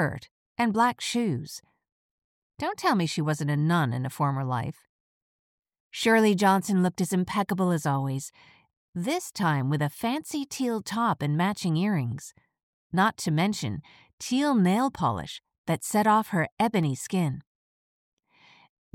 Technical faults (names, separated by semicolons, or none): CD scratch ticks